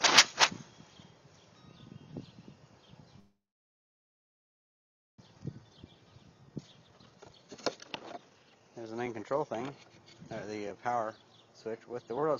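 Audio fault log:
3.19–5.20 s, call audio freeze: the sound stops and is held as a brief fading buzz, then about 1.8 s of silence, likely from packets stalling in transit while the jitter buffer ran dry. Nothing's lost, it resumes right where it stopped, just about 2 s late.
5.28–9.55 s, jitter buffer speed-up: with the backlog that piled up during the stall, the receiver trims tiny pitch-period slices over and over. That's why things run at roughly 146% speed with unchanged pitch, sounding rushed, and around 2 s of backlog gets cleared.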